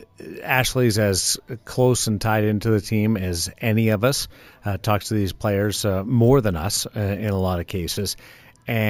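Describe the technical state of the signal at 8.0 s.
At 8.0 s the speech carries imaging from sample-and-hold upsampling, present through the whole clip. Each sample was simply repeated, which points to a 16 kHz source raised to 48 kHz without smoothing. Mirrored copies fill 8 to 16 kHz, about 16 dB down, as a bright metallic fizz that tracks the speech.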